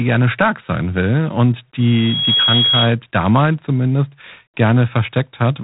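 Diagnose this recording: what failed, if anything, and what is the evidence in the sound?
Codec stage: G.726 ADPCM at 24 kbit/s. Nothing passes above 3.9 kHz. A harsh, rasping hiss rides the speech level, because coarse prediction-error steps add noise.

Playback path: loudspeaker feedback squeal from 1.80 to 2.95 s, after "stark sein will und", before "damals zumindest". A 3.3 kHz tone swells over about half a second to roughly speech level. The microphone-loudspeaker loop gain exceeds one there.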